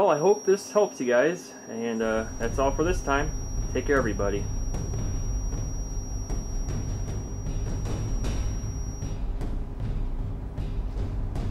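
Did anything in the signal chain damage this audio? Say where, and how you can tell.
Yes. A feedback whistle sits under the sound from the start to about 9.21 s, then stops. It is a thin, steady tone near 5.7 kHz, well below the main sound in level, and it swells and fades slowly in level. The likely stage is the acoustic path between a loudspeaker and the microphone. That loop is running right at the edge of feedback. One high frequency keeps ringing around it without growing into a full howl.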